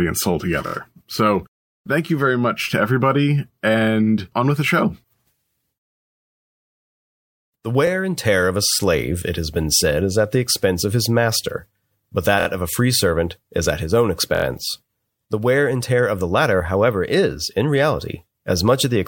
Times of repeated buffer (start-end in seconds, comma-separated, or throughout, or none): 0.67-0.74, 12.40-12.47, 14.35-14.44